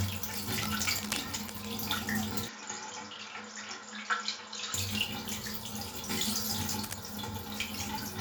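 A recording of everyday sounds with two kinds of fault. From 0.34 to 1.66 s and again from 6.56 to 6.94 s, uneven scratching bursts sit roughly 10 dB under the sound, cable scratch noise that likely comes from a worn lead or connector being moved. Between 2.48 and 4.74 s the audio drops about 5 dB, loses everything above 7.2 kHz and picks up a faint new noise floor with no gap at the change, the mark of an input switched to a poorer device, likely a fallback microphone.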